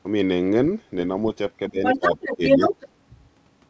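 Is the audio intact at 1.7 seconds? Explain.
No. At 1.7 seconds the speech is caught in speech suppressed in double talk, which runs from 1.59 to 2.18 s. The level sags by roughly 15 dB at its deepest, and the speech thins and breaks up in pieces adding up to around a third of a second. The likely cause is the echo canceller hearing both ends talking at once and turning down this talker's speech along with the loudspeaker echo it meant to remove.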